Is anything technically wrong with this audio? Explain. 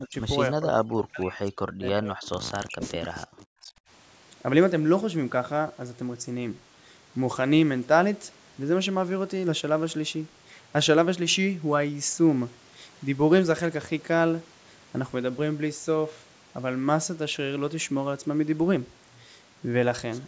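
Yes, there are two problems, both in the first four seconds of this speech.

Speech suppressed in double talk hits at 0 to 0.15 s, 0.53 to 2.18 s and 2.57 to 3.74 s. The voice ducks hard, by as much as roughly 40 dB. That's likely an echo canceller hearing both sides at once and turning everything down.

Echo leak shows up briefly at 3.03 to 3.07 s as a faint scrap of voice repeated about 308 ms late and sitting roughly 25 dB under the speech. A loudspeaker echo likely slipped past the canceller and got sent back. The call's microphone processing is present too, with nothing above 8 kHz.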